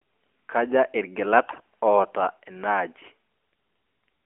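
From 1.50 to 1.63 s the speech turns briefly hoarse, scratchy and gargly while keeping roughly its pitch and level. These are AMR bit errors: roughly one bit in ten of the weakly protected data arrived flipped across a stretch that fits about seven 20 ms frames, misplacing excitation pulses and skewing the fine pitch, gain and spectral values. The damage sits within the 300 to 3400 Hz phone band of the AMR narrowband codec.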